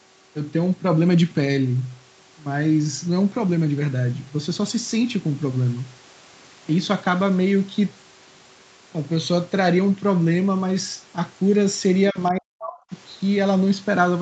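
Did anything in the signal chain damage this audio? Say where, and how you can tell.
Yes. Between 12.1 and 12.94 s the speech sinks in pieces, falling by roughly 40 dB at its deepest, with about 0.7 s of that span affected in total. The damage most likely happened in the call processing stage, as speech suppressed in double talk: the echo canceller could not tell the near talker from the loudspeaker echo and attenuated both. On a spectrogram the harmonic bands, already capped near 8 kHz, fade to near-blank patches, and the waveform envelope shows gated notches.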